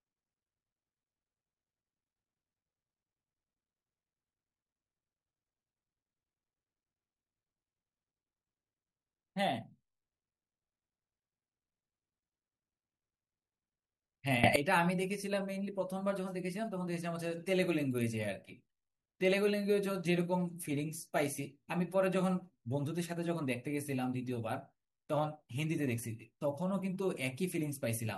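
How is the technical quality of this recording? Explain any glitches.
The recording has one clear glitch, a sudden gain jump in the speech from 14.44 to 14.56 s. The level, background noise included, leaps about 18 dB, then drops back, likely from a gain change applied instantly without a ramp. The waveform steps abruptly up and down, and the spectrogram brightens across all frequencies as a block with sharp vertical edges.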